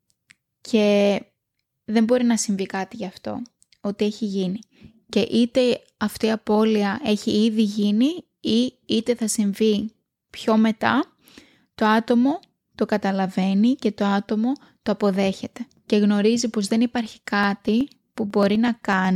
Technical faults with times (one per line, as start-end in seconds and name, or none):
17.06-19.05 periodic USB or driver dropouts